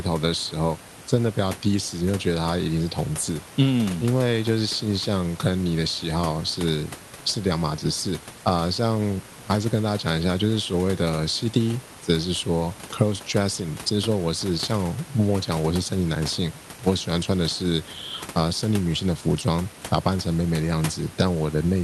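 Nothing stood out on listening to this speech recording.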